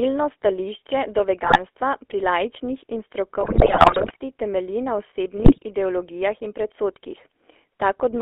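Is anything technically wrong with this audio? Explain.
Yes. The whole clip runs through a GSM full-rate codec, plainly audible. The line is band-limited to 300–3400 Hz, and at 13 kbps the vocal-tract model is driven by a sparse pulse excitation, so the speech takes on a buzzy, gravelly roughness. A spectrogram shows nothing above the band edge, with a coarse, smeared harmonic texture below it.

GSM bit errors break in three times: from 1.44 to 1.59 s, after "stališče do"; from 3.40 to 4.32 s, after "pri laični in" and before "temelji na"; and from 5.38 to 5.58 s, before "ideologijah in". Corrupted filter, pitch and gain parameters distort the spectrum frame by frame, producing squawks, pops and gargling. On the waveform these appear as sudden level spikes, and on the spectrogram as blocky, misplaced energy. The long middle stretch is the worst.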